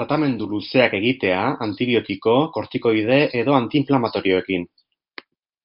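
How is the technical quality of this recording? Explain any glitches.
No glitches can be heard anywhere in this recording. Nothing in the audio needs a technical explanation.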